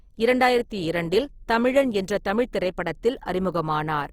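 Throughout the speech, Opus compression is plainly audible, likely from the CELT music mode at a rate that fits about 24 kbps. Starved bands are refilled with folded or noise content, so the sound turns rough and grainy rather than swirling as MP3 would. Bandwidth stays full, reaching 20.4 kHz.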